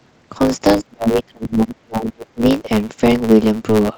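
From start to finish the speech carries a steady 109 Hz buzz and runs about 1.09 times fast: a block size mismatch (truncated), dropping each block's tail.

Between 0.78 and 2.45 s the speech dips, falling by about 30 dB over roughly a second and a half, likely speech suppressed in double talk by the echo canceller.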